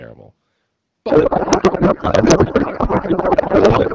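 From 1.09 s onward, a codec payload misread replaces the speech with garbled warbling noise, which fits octet-aligned AMR frames being unpacked as bandwidth-efficient.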